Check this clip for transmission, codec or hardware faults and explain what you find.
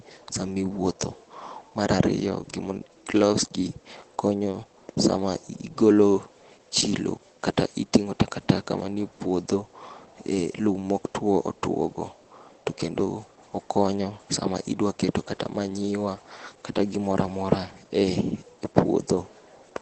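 One fault runs through the entire clip, and heavy Opus compression is the likely cause. The speech sounds muffled and hoarse, with nothing above 8.5 kHz. That narrowed band and rough texture point to the encoder's SILK speech mode at a very low bitrate of around 12 kbps. This differs from MP3 damage, which produces swirling artefacts and spectral holes. Here the top of the band is cut off cleanly and the voice itself is roughened.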